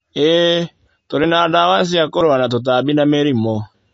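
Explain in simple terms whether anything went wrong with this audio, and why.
The whole clip has a dull, watery sound with nothing above about 7.5 kHz, most likely from heavy MP3 compression throwing away treble and quiet detail to save space.

There are two quick skips, at 1.24 s and 2.21 s, where the speech jumps ahead. Each is likely a dropped buffer (overrun), with a few hundredths of a second of audio skipped.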